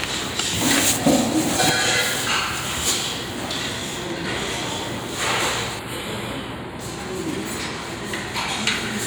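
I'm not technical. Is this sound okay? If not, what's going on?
No. From 5.79 to 6.79 s, one channel runs a tiny fraction of a millisecond behind the other before the two are combined. This is channel delay (comb filtering). Some high tones, from around 7 kHz, cancel out, so that second sounds hollow and dull.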